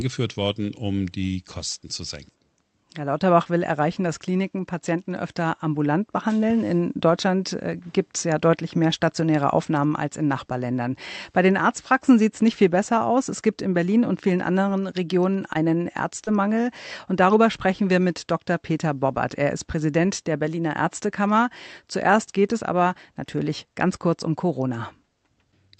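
At 15.53 to 15.57 s, there is a short concealed packet loss. About 20 ms of the call audio arrived too late for the decoder. The receiver covered the gap by extending the preceding sound, then crossfaded back into the real signal. It comes across as a brief smear. The same fault recurs at 16.25 to 16.29 s, again with about 20 ms lost. It sounds as a quick wobble within the speech. The Opus call path keeps its 8 kHz top end through both repairs.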